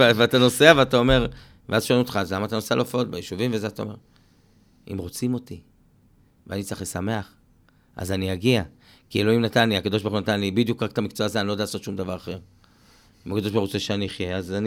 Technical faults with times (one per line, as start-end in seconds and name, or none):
none